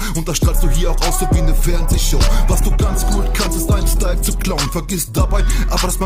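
At 1.52 s the quality steps down abruptly and stays lower to the end, with no gap: an adaptive stream at a lower bitrate. Codec artefacts rise. This fits the player switching from a 64 kbit/s Opus rendition to a 24 kbit/s one after the connection slowed.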